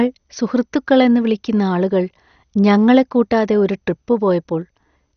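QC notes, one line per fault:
Throughout, MP2 compression: the speech sounds dull with nothing above 6.5 kHz, plus a clearly audible gurgly, grainy edge. That's likely a low-rate MP2 encode, around 48 kbps judging by the sound, dropping upper sub-bands and coarsely quantising what's left.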